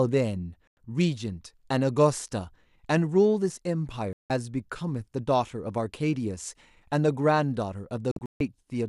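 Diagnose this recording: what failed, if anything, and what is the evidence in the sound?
Digital broadcast dropout at 0.67 to 0.78 s, 4.13 to 4.30 s and 8.11 to 8.41 s, a reception-stage failure. The speech mutes abruptly and resumes, the last as broken holes across 0.29 s with a longest gap of 0.14 s, where the receiver silenced corrupted frames and their content was lost.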